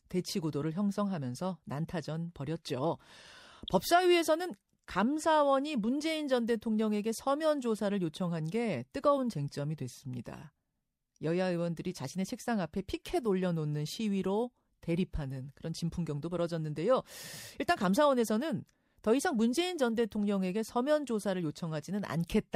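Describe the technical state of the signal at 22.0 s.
At 22.0 s the speech signal is intact, with no technical fault audible at that moment.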